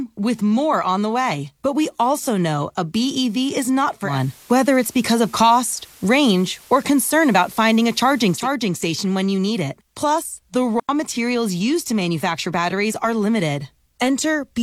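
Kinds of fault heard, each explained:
Digital radio blending to analogue: After "is not", the sound cross-fades over about 200 ms to the FM signal, with hiss roughly 30 dB down and a level shift of about 4 dB, returning before "station when you need".
Digital wireless dropout: The receiver briefly mutes, leaving a clean, silent gap of about 92 ms just before "materials used to manufacture", with no noise burst.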